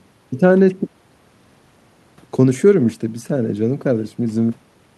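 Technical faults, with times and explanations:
No technical faults are present; the only background is the room noise picked up by the microphone, sitting about 39 dB below the speech, which belongs to the recording rather than the signal chain.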